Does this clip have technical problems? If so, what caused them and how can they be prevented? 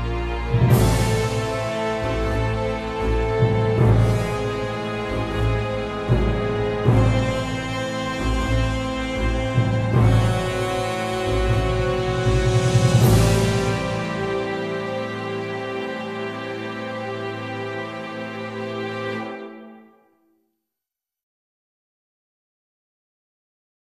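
No, there are no technical problems in this recording.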